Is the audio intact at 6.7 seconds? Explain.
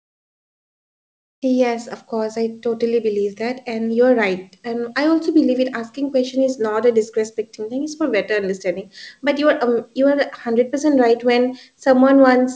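Yes, the audio is intact at 6.7 seconds, with the speech passing through the G.722 call path as usual and nothing above 8 kHz, as that codec's bandwidth allows.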